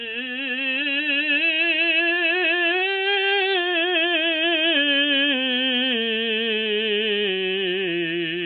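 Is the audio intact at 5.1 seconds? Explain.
No. At 5.1 s the music carries the clip-wide damage of likely MP3 compression at a very low bitrate: the treble stops at 4.5 kHz, and weak frequency lines flicker, giving a watery, swirly texture.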